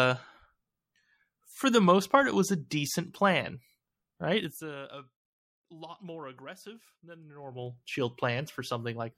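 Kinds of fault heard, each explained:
Zipper noise: fast ticking rides on the speech while the level falls, then rises, moved in unsmoothed 2 dB steps about thirty times a second.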